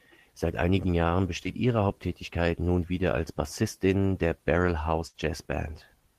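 A short concealed packet loss occurs at 1.43 to 1.47 s. About 20 ms of the speech arrived too late to be decoded, and the receiver covered the hole by extending the sound that came just before it for roughly 15 ms, then crossfaded back into the real signal. The patch is brief enough to pass as a brief smear or wobble, but anything spoken in that missing slice is lost.

A burst of packet loss follows at 5.07 to 5.16 s. This time about 60 ms of consecutive audio failed to arrive in time. The receiver stretched the last received sound across roughly 67 ms, lowering its level as the gap lengthened, which produces a held, fading tone or hiss in place of real speech. When playback resumes it picks up further along, so the stretch in between is simply gone.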